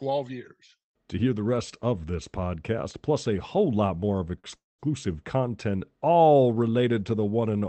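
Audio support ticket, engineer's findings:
Short stall from a late packet, 4.39–4.47 s: packet missed its playout slot, jitter buffer underran. Receiver held the last sound about 43 ms, then resumed at the same point. Sound lingers with a faint buzzy smear. Nothing lost, but playout now runs 43 ms later.

Call audio freeze, 4.56–4.82 s: likely packets delayed in transit, emptying the jitter buffer again. Concealment buzz decays quickly, then about 190 ms of silence. Audio resumes where it stopped. 228 ms gap inserted, nothing missing. Opus call path, band-limited near 8 kHz.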